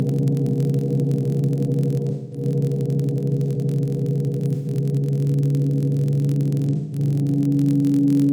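A steady buzz near 43 Hz runs through the whole clip, rising and falling with the sound's level. This is a filter restarted on every block. Its state is cleared each time, so each block opens with a small transient. The rate fits a 1024-sample block.

From 2.10 to 2.42 s, 4.53 to 4.68 s and 6.75 to 6.99 s, the sound turns smeared and phasey. These are AAC frame losses with concealment. The decoder rebuilt gaps of 213, 128 and 171 ms from the last good spectrum.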